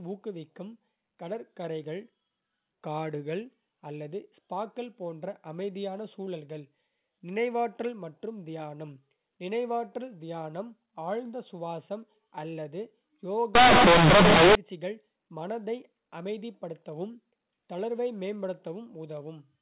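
From 13.55 to 14.55 s, companded audio read as linear turns A-law bytes into loud, buzzy distortion: a waveform bent out of shape, a spectrogram smeared broadband.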